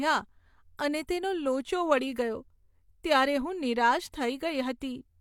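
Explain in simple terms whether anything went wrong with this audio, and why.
Pre-echo smears two sharp sounds, from 4.11 to 4.14 s and at 4.80 s. The compression noise spills ahead, adding a short hiss before each attack.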